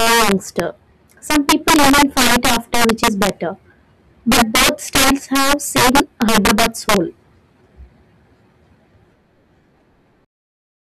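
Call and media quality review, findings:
Violent sharp cracks on loud speech peaks at 0.00–0.60 s, 1.31–3.29 s, 4.32–6.96 s, worsening across the three. Integer overflow: gain drives peaks about 7, 9, 13 dB past full scale; samples wrap to opposite sign instead of saturating. Check gain stage limiting.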